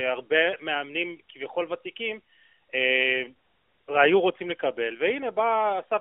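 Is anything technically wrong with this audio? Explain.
No, nothing here sounds technically wrong; it's just speech with the narrow, phone-line character you'd expect from a mobile call.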